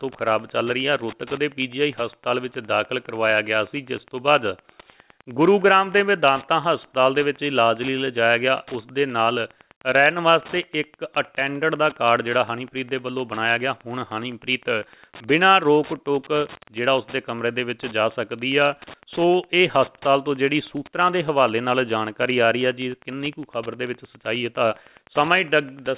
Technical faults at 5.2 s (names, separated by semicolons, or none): Wi-Fi interference